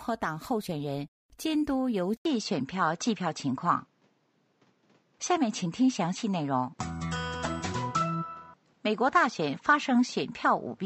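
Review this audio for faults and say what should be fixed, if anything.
At 2.17 s the sound drops out for 80 ms, then returns duller, a few dB different in level, with nothing above 8 kHz and a new, quiet noise floor. This is likely an input switched to a poorer device. Lock the recording input so the system cannot change devices mid-session.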